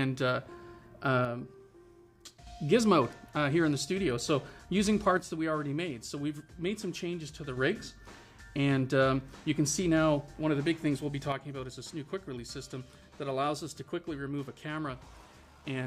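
The level drops abruptly by about 6 dB from 1.25 to 2.47 s, from 5.17 to 7.57 s, and from 11.32 s to the end. Each drop is likely one channel dropping out of the stereo pair before the mono sum.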